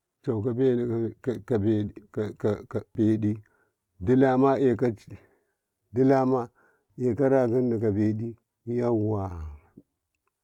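At 2.95 s the speech breaks briefly. The same thing happens again at 8.43 s. Both are damaged data in a compressed stream. Part of the encoded data at those points is wrong. The decoder cannot read the affected frames correctly. It loses its place in the stream and hunts for the next valid frame header. That garbled decode comes out as a short chirp, squawk, click or hole in the speech.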